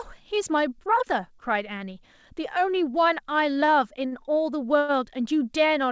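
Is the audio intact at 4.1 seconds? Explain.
No. From 4.07 to 4.15 s there is a short stall from a late packet: a packet arrived late, the jitter buffer ran dry, and the receiver stretched the last speech sound by about 50 ms before resuming at the same point. Nothing is lost, but the sound hangs briefly with a faint buzz or dip.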